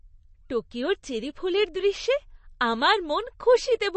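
MP3 compression damage runs throughout this short speech clip and is plainly audible. Nothing is present above 8.3 kHz, a hard treble ceiling that points to an encoder likely starved of bits, at a rate around 35 kbps. With so few bits, weak frequency lines drop in and out between frames, giving the voice a watery, swirling texture, sibilants a metallic edge, and consonant onsets a smear.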